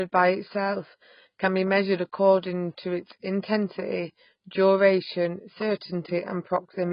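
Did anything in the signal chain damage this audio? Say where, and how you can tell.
Yes, at the codec stage, throughout the speech: nothing above about 5.1 kHz, with a dull, smeared, warbly, fizzy texture on sibilants. That's likely heavy AAC compression, which fits a very low bitrate around 16 kbps, where the encoder drops the top band and starves the rest.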